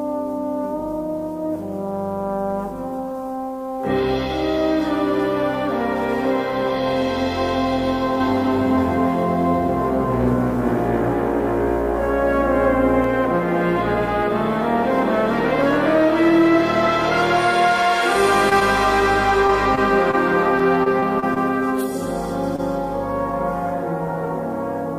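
A doubled audio track runs from 8.20 to 13.04 s. A second full-band copy of the same audio trails the original by roughly 0.3 s at a few decibels lower level, with no decay or room colouring. It starts and stops abruptly. The likely cause is a slower second capture path or an edit holding two copies out of step.

Short concealed packet loss first appears at 18.49 to 18.53 s. About 20 ms of audio never reached the decoder in time, and the receiver patched the hole by extending the preceding sound before blending back. The result is a brief smear, repeated at 19.75 to 19.79 s.

A short stall from a late packet occurs at 19.47 to 19.51 s. The jitter buffer emptied while waiting, so the receiver stretched the last sound by about 23 ms and then resumed where it left off. Nothing is lost, but the sound is briefly held with a slight buzz or dip.

Another short concealed packet loss follows at 20.11 to 20.15 s, again about 20 ms filled in.

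Repeated packet loss producing robotic sound covers 20.59 to 21.38 s. Five separate gaps, the longest 23 ms, remove about 80 ms in total, and roughly 11% of that stretch is concealed. Each gap is patched before the next arrives, giving choppy audio with pieces missing.

A final short stall from a late packet at 22.56 to 22.60 s holds the sound about 21 ms too long before playback continues.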